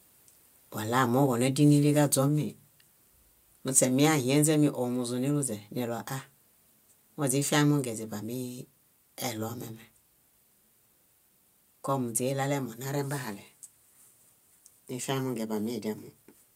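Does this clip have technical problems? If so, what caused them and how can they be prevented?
Yes: at 2.28 s the speech and background drop about 2 dB at once, a microphone volume stepped down, likely the call software's auto input gain. Turning off automatic mic adjustment and setting a sensible fixed level prevents it.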